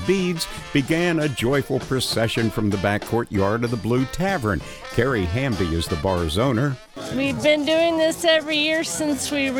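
From 6.60 s to the end at 9.59 s the audio contains a time-stretched section, slowed to about 0.69 times its original pace, while the pitch stays exactly where it was. The slowed part drags, as short pieces are repeated to fill the extra length, likely software fitting the audio to a target duration. Unlike a tape slowdown or sample-rate mismatch, nothing drops in pitch; only the pace changes abruptly.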